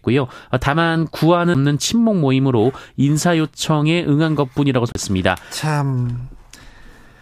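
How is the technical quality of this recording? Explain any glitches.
Two CD skips break the speech, at 1.54 s and from 4.92 to 4.95 s. Each time a knock or a disc flaw sends the laser onto another turn of the disc's spiral, so playback mutes briefly (a few milliseconds, then about 30 ms) and resumes elsewhere, heard as a tick and abrupt jump.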